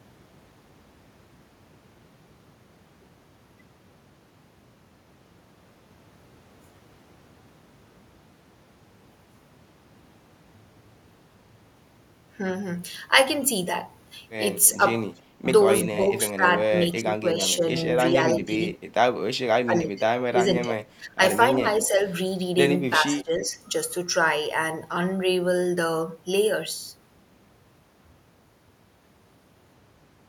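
Speech with an echo leak from 14.66 to 15.21 s: a faint delayed copy of the voice trails the original by 323 ms, roughly 25 dB below it. This is likely a far-end loudspeaker whose echo canceller let some residue back down the line. A constant-gap repeat like this sets it apart from room reverberation, which smears sound continuously rather than returning a distinct copy. Speech suppressed in double talk follows, likely the same canceller ducking this talker while both sides speak at once. There is a shallow dip of about 5 dB for roughly 100 ms around 14.76–14.87 s. Deeper gating reaching roughly 15 dB appears between 15.41 and 18.63 s (about 1.5 s in total) and between 19.65 and 21.99 s (about a second), with dips near 10 dB across 22.9–23.58 s. Unlike network dropouts, the voice sinks and returns in pieces tied to the overlap instead of vanishing abruptly.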